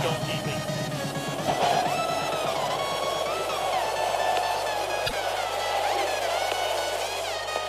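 Mains hum runs through the whole clip as a steady low tone at 50 Hz, roughly 25 dB below the main signal, so it sits clearly under everything. A ground loop or a nearby transformer has let the power line leak into the signal path, adding that constant fundamental, along with some of its low harmonics, to the recording. It never fades or shifts; the drone is equally present from start to finish.

A broken MP3 bit reservoir is the likely cause of the brief disruption from 5.06 to 5.13 s, about 70 ms long, where the audio skips forward and does not play through cleanly. MP3 frames can borrow bits from earlier frames. If frames are lost, the frames right after the gap reach back for data that is no longer there and decode from the wrong bytes. The length of the disturbance fits two or three frames of roughly 26 ms each.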